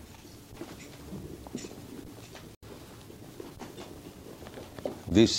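A corrupt frame decoded at 2.55 to 2.64 s puts a short burst of misplaced energy, peaking around -35 dBFS, into the audio across a few damaged frames.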